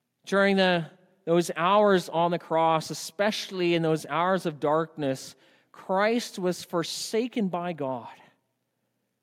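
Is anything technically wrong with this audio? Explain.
No, nothing technically wrong turns up anywhere in this speech recording, so there's nothing here to flag.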